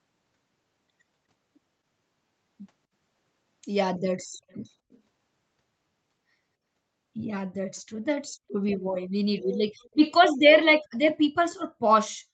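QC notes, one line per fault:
4.49–4.70 s, 4.91–4.99 s and 7.76–7.81 s: echo leak. Faint scraps of the speech return 253 ms after the original, some 35 to 40 dB below it. This is likely an echo canceller on a loudspeaker end letting residue of its microphone pickup be sent back. On a spectrogram, weak ghost copies of the preceding harmonic patterns appear, shifted right by that delay. The waveform shows only a slight low-level ripple under the main signal.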